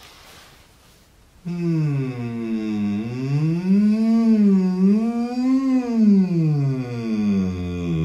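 No technical faults can be heard anywhere in this audio.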